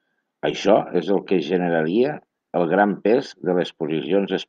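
No technical faults can be heard anywhere in this recording.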